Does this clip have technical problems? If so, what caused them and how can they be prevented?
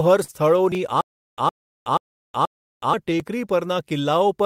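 Yes. Clock drift between sender and receiver runs throughout: the sender's clock is about 4% slow, so the receiver's jitter buffer keeps draining. Locking both ends to a common clock or adding adaptive resampling prevents it.

Repeated timing corrections from 0.04 to 4.43 s stretch the audio to 97% speed, adding roughly 150 ms through small, uneven repeats. A proper drift-compensating resampler would keep this smooth.

A short stall from a late packet at 0.24–0.30 s holds the sound for 42 ms with nothing lost, just a slight drawn-out buzz or dip. A somewhat deeper jitter buffer absorbs this.

Stutter with silent gaps from 1.01 to 2.93 s: a 112 ms burst repeats four times, each followed by 369 ms of dead silence, every 481 ms. It's likely a stalled stream retrying. Better buffering and network headroom keep the player fed.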